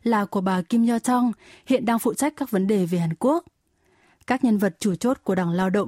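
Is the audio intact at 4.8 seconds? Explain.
Yes, the speech at 4.8 seconds is intact, with no audible fault at that moment.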